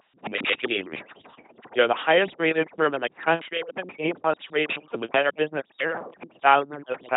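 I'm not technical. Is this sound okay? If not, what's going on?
No. From start to finish the voice sounds buzzy and robotic, like a machine imitating a person. This is an LPC-10 vocoder, an old low-quality speech system that rebuilds the voice from a buzz or a hiss instead of carrying the real sound. It also drops everything above about 3.9 kHz, so the voice sounds dull.

Throughout the clip the background has been pushed down and breaks up into twinkling specks. This is overdone noise removal: a cleanup tool set too strong, which erased quiet parts of the voice along with the noise.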